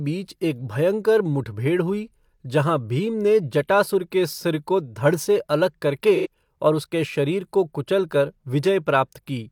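After "धड़ से अलग", 6.15–6.27 s, there's AAC frame loss with concealment: about two frames' worth is rebuilt from the last good spectrum, so it sounds smeared and phasey.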